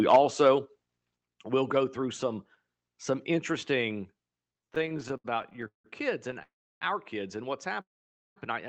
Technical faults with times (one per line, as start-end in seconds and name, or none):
4.53-5.86 repeated stalls (stutter)
6.28-6.43 repeated stalls (stutter)
6.43-6.83 call audio freeze
7.81-8.38 call audio freeze